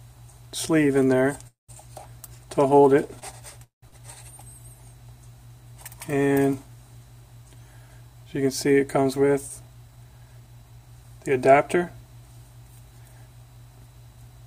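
Two call audio freezes, at 1.47 to 1.71 s and 3.64 to 3.84 s, stretch the last sound into a fading buzz that then drops to near-silence (about 0.16 s and 0.14 s), likely from delayed packets emptying the jitter buffer. On a spectrogram each shows a smeared band fading into a blank gap. Short stalls from a late packet at 3.19 to 3.24 s and 3.88 to 3.94 s hold a sound 25 ms and 39 ms too long, appearing as brief flat, repeated waveform stretches. A jitter buffer speed-up from 8.98 to 11.05 s trims pitch-period slices, playing about 10% fast at unchanged pitch, hurried, with roughly a fifth of a second removed and slightly compressed spectrogram spacing.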